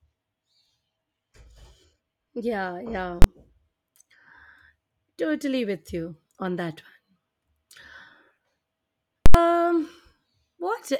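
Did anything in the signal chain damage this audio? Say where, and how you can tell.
Yes. Twice the speech is replaced by invalid numbers at full scale: a hard bang at 3.22 s lasting about 21 ms, then at 9.26 s an event with a sharp pop at onset and release at 9.34 s and nothing audible in the 85 ms between. The damage lies in the processing stage: a calculation blew up to infinite or invalid values, which were clamped to the extreme sample value for a whole processing block, and the durations fit blocks of 1024 and 4096 samples.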